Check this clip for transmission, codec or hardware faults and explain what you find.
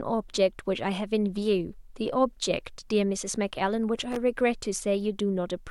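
One hardware fault is present: a loose connector crackle from 4.12 to 4.17 s, lasting under 50 ms. A worn or dirty contact in the signal path is rapidly making and breaking, so the speech is chopped on and off and any DC on the line jumps with each break, adding pops. It is heard as a short, irregular scratchy burst. On a waveform it shows as jagged spikes and dropouts; a spectrogram shows broadband vertical streaks.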